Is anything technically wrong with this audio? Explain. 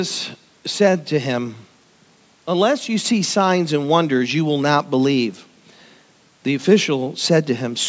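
No, the speech shows no technical faults, only the expected band-limiting of call microphone processing, with the lowest bass trimmed by its high-pass filter and nothing above 8 kHz.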